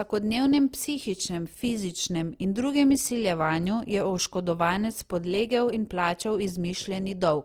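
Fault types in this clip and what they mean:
Opus compression: The speech is rough and grainy throughout, with tones turned noisy rather than swirly. This fits a low rate near 24 kbps, likely Opus in music mode filling starved bands with noise. A spectrogram shows smeared, noisy bands with few holes, reaching 20.3 kHz.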